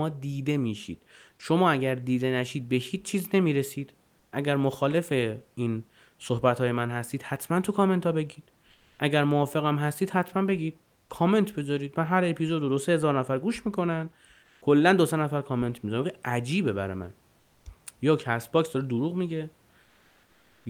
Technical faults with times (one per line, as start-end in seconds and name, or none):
4.19-4.31 comfort noise in place of the background
8.71-8.99 comfort noise in place of the background
14.43-14.61 comfort noise in place of the background
17.39-17.65 comfort noise in place of the background
19.83-20.65 comfort noise in place of the background